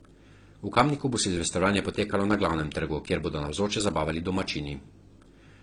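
Throughout, the speech carries stacked compression artefacts with nothing above 10.5 kHz, likely transcoding between lossy codecs, an AAC-LC encode re-encoded as HE-AAC, compounding both codecs' artefacts.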